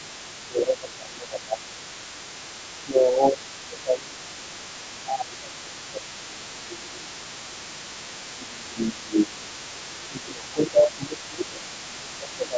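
A speech recording in which a second voice leaks through faintly for the whole clip, sitting roughly 25 dB below the main talker. This is other side's voice leaking through, likely left behind when an echo canceller failed to remove far-end audio picked up from a loudspeaker. On a spectrogram it shows as a weak, separate set of speech harmonics running underneath and between the talker's own, continuing through the pauses where the waveform should fall quiet. The talker's voice is also pulled down by around 20 dB in four stretches: 0.4 to 1.66 s, 2.79 to 7.46 s, 8.35 to 9.51 s, and 9.99 s to the end. This is speech suppressed in double talk, where the canceller, likely unable to separate near-end speech from the echo while both were present, turned everything down together. The waveform shows the envelope caving in across these spans in uneven bites, and the spectrogram shows the talker's energy thinning or dropping out in patches there. 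The band stops at 8 kHz throughout, consistent with the call microphone processing chain.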